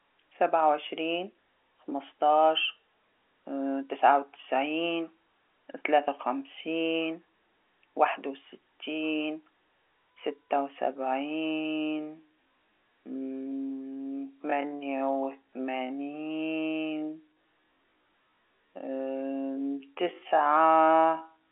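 Time-stretched section from 11.45 s to the end: speech abruptly slows to 0.53 times its pace at unchanged pitch, likely from repeated short pieces, sounding dragged.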